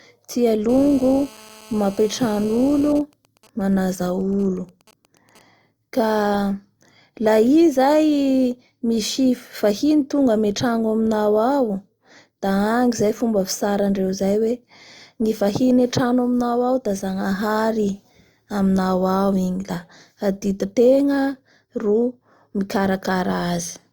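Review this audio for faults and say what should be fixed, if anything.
A 2G phone in an active call near the recording chain was transmitting its bursts 217 times a second, and an audio stage rectified that radio energy into the signal. From 0.69 to 2.93 s this appears as GSM phone buzz: a hard, raspy 217 Hz tone with a dense stack of harmonics, about 23 dB below the speech and unrelated to it. Keep phones out of the room or in flight mode, and use shielded, balanced cabling so radio pulses can't be demodulated.

From 2.95 to 5.41 s the same phone's user stopped talking, so it sent only short groups of bursts rather than a continuous stream, and the circuit rectified each group. These GSM signalling bursts come through as even ticks with a longer 217 Hz buzz twice a second, much quieter than the earlier buzz at roughly 30 dB below the speech. The same fix applies here: remove the phone from the recording area and improve RF shielding and filtering at the inputs.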